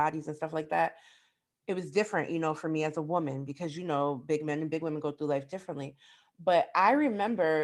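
Nothing in this bit of recorded speech stands out as a technical problem; it's just someone talking, with nothing getting in the way.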